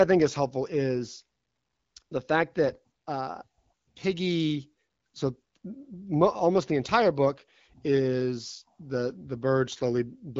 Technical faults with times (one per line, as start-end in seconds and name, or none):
none